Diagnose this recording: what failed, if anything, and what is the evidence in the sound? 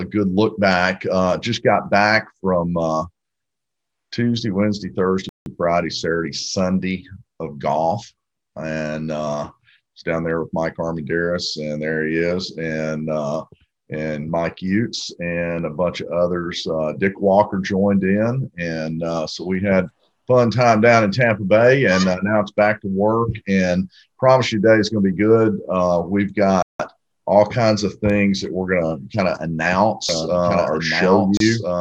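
The driver or buffer stage failed to deliver audio in time, so whole blocks went out as zeros. The sound drops abruptly to digital silence: about 170 ms at 5.29 s and 26.62 s, which fits an 8192-sample buffer, and a shorter 31 ms hole at 31.37 s.

From 30.09 s to the end, a doubled audio track appears, most likely from a second, slower capture path mixing the same signal in again. A full-band copy trails about 1.5 s behind, roughly 5 dB quieter, with no reverberant decay, and it enters abruptly.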